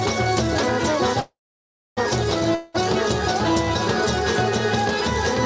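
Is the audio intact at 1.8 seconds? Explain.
No. At 1.8 seconds the audio is in a call audio freeze, from 1.20 to 1.99 s. The likely cause is packets held up in transit, so the jitter buffer ran dry and the receiver padded the wait for about 0.77 s. The last sound carries on as a fading buzz or hiss and then goes silent for about 0.62 s. When the flow resumes, the audio picks up where it stopped. Nothing is lost, but everything after it arrives later.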